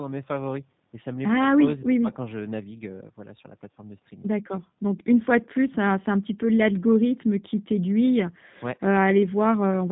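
Throughout the clip, the speech has been carried by the G.729 codec at a rate that fits 8 kbit/s. It rebuilds each 10 ms frame from a vocal tract model and a few pulses, discarding everything above 4 kHz, so the speech sounds muffled, rough and plainly synthetic.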